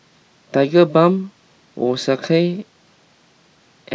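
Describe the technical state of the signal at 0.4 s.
At 0.4 s the speech signal is intact, with no technical fault present at that moment.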